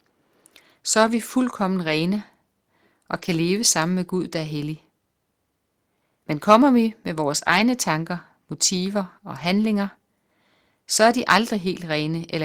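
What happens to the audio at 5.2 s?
Nothing goes wrong at 5.2 s; the speech carries on there without any dropout, click, distortion or other fault.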